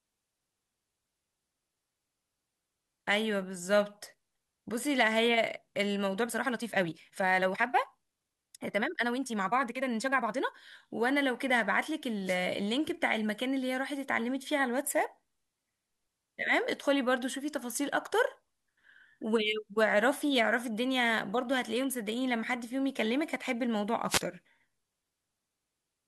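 From 6.17 to 10.51 s the speech runs about 1.56 times faster while its pitch stays put, which points to a time-stretched section, likely from software squeezing that stretch to fit a length by dropping short pieces of audio. The pace jumps abruptly and sounds rushed. At 12.25 to 12.38 s and again at 24.08 to 24.21 s come two wireless microphone noise hits, each lasting about 0.13 s. A fade in the FM radio signal lets receiver noise rise, heard as a brief swish of static.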